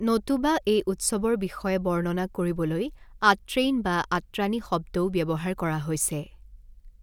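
Speech recording with no audible technical fault anywhere in the signal.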